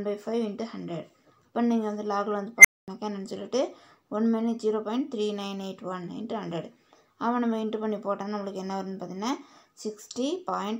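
An unstable filter fault runs from 2.58 s to 2.88 s. A tone of around 2 kHz swells out of the audio in about 64 ms and quickly becomes a loud, clipped squeal. A recursive filter has been fed coefficients that push its feedback loop past stability, so each pass adds energy until the values overflow. The output then drops out for about 0.23 s until the filter resets.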